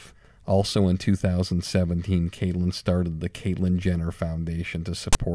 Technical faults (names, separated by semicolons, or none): file tags played as audio